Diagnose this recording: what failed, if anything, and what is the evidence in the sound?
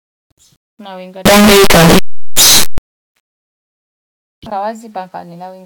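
From 1.26 to 2.78 s the speech becomes very loud, harsh distortion, with quiet moments as loud as the rest. This is a signed and unsigned mix-up, likely in sample-format conversion of 8-bit samples. Each zero crossing jumps full range, so the waveform turns into dense swings and the spectrogram smears broadband.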